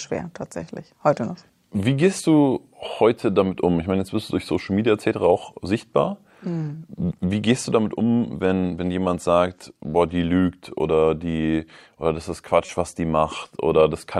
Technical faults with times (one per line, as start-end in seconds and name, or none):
12.65-12.72 corrupt frame decoded